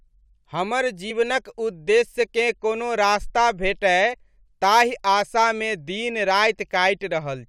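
Speech runs along and then, at about 1.10 s, jumps ahead: compressed frames skipped, a couple of them, so roughly 40 ms of audio simply never plays. The decoder either didn't get those frames or threw them out as damaged. It happens again from 4.13 to 4.15 s, one frame this time (about 20 ms), consistent with frames around 21.3 ms long.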